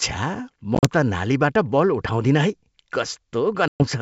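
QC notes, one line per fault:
0.75–0.86 s, packet loss on an ADPCM call: 60 ms of audio drops out in short silent holes spread over about 80 ms, the longest 40 ms, which suggests several lost packets. Each hole has hard edges and shows as a full-height blank column on a spectrogram and a flat line in the waveform. After each hole the decoder's predictor and step size no longer match the sender's, so the sound comes back slightly distorted and settles within tens of milliseconds.
3.68–3.83 s, packet loss on an ADPCM call: 120 ms of audio lost to silence, consistent with about ten lost packets. It appears as blank columns across all frequencies and a flat waveform with abrupt edges. On resumption the mismatched adaptation produces a brief distorted or wrong-level onset before the sound recovers.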